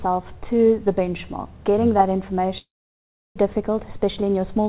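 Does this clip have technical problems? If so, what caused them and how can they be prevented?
Yes. From 2.58 to 3.38 s there is a long network dropout, most likely caused by packets that stopped arriving. The receiver stretches the last sound into a fading buzz, then holds about 0.69 s of silence, and the audio resumes having skipped roughly 0.6 s of material. Unlike brief packet-loss concealment, the gap is long and content is missing, not just smoothed over. It can be prevented by using a more stable network link or adding redundancy such as forward error correction.

From 3.91 to 4.24 s a jitter buffer speed-up plays the sound at 114% speed while the pitch stays the same. Delayed packets piled up, and the receiver trimmed pitch-period-sized slices, about 50 ms in total, to shrink the backlog. The unchanged pitch separates this from a sample-rate or clock mismatch, which would raise the pitch along with the tempo. 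It can be prevented by reducing network jitter so the buffer rarely overfills and seldom needs to catch up.

The G.711 call path, with nothing above 4 kHz, is not a fault.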